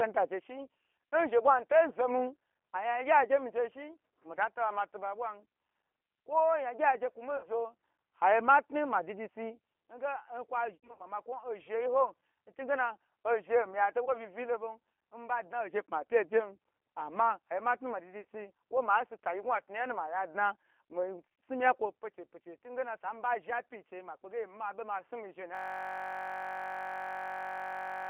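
Throughout this speech recording the voice sounds narrow, slightly rough and synthetic, confined to roughly 250 Hz to 3.4 kHz with nothing above, and the damage is plainly audible. That character comes from the G.729 codec. Its 8 kbit/s coding, probably the G.729A variant, rebuilds each 10 ms frame from a vocal tract model, a pitch predictor and a few pulses rather than the original waveform. Four brief breaks interrupt the flow, at 7.37–7.48 s, 10.75–11.07 s, 14.05–14.09 s and 18.21–18.25 s. At each, the sound smears into a buzzy tone or coloured noise that fades, and stays weak or distorted for a moment afterwards. The 10.75 s break is the longest and choppiest, with gaps spread over about 240 ms and the longest single gap about 80 ms. This is VoIP packet loss concealed by the speech codec. When audio failed to arrive, the decoder kept extrapolating its last pitch and filter with falling gain. 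Because every frame builds on the one before, recovery lags after real audio returns. From 25.55 s to the end, the sound collapses into a steady buzz at about 46.9 Hz, one 21.33 ms fragment repeating exactly. This is a system hang loop. The computer or driver stalled while the audio hardware kept replaying the same ring buffer, which fits a 1024-sample buffer.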